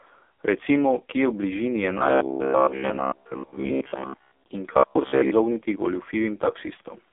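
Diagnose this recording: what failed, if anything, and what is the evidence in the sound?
Codec stage: heavy AMR narrowband mobile codec damage throughout. Nothing passes above 3.5 kHz, so the spectrogram goes blank there. The buzzy, synthetic texture fits a low mode near 5 kbps.

Buffer stage: robotic sound from repeated short buffers at 1.98–4.47 s, after "bližini je", and at 4.73–5.33 s. A rigid 66.8 Hz buzz, likely from a 15 ms block being replayed, shows as evenly spaced harmonics and a roughly periodic waveform.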